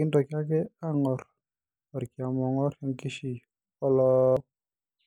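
From 4.13 to 4.37 s, system hang loop: a frozen driver replays one identical 46 ms slice at 21.5 Hz, exact repeats rather than an underrun's silent gaps.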